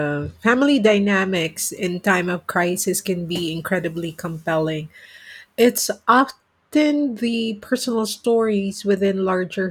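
Speech, and from 1.36 to 5.78 s there's pre-emphasis left on: a 50 µs FM-style treble lift, about 11 dB up at 10 kHz, never de-emphasised, so it's thin and hissy.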